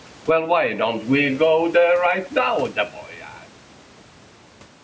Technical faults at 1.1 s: gain pumping

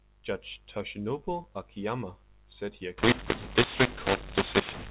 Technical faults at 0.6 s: none

